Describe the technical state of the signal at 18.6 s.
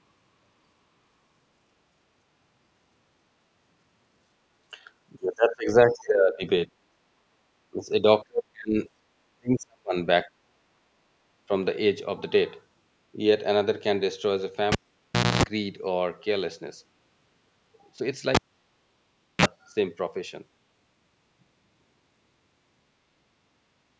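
At 18.6 s the cable's been pulled and plugged in: a pop at 18.35 s, about a second of near silence, a 38.67 ms burst of 60 Hz mains buzz, then another pop by 19.46 s.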